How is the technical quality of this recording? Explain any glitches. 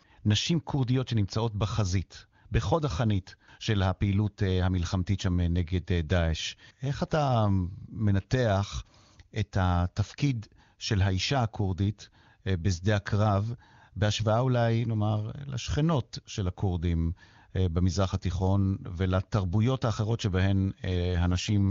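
The speech carries one glitch near the very end, heard through an AMR wideband (HD Voice) codec. From 21.31 to 21.59 s there is an AMR rate drop. A weak link made the codec spend fewer bits on the sound and more on error protection. The band stays full and nothing cuts out. The speech turns rougher and more synthetic, which fits a fall from 23.85 to 8.85 kbit/s.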